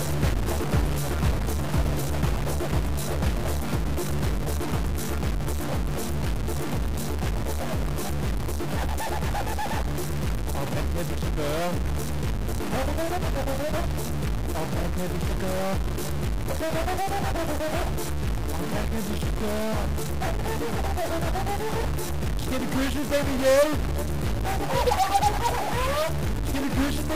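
Throughout, a stuck bit, likely a data line held fixed, shifts about half the samples by that bit's weight, filling even pauses with broadband spectrogram noise.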